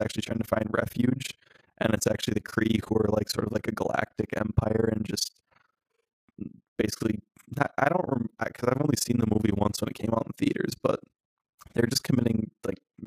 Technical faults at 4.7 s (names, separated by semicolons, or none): overlap-add ripple